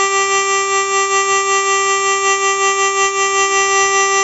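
From start to finish the music carries 4-bit ADPCM compression, and it's heavy. Each sample is coded as a coarse 4-bit step from a predicted value, so a gritty hiss rides on every loud passage and rises and falls with the level. Sharp attacks smear because the step size can't grow fast enough. Nothing comes through above about 7.8 kHz, which fits a roughly 16 kHz sample rate at around 64 kbps, so the top end sounds dull.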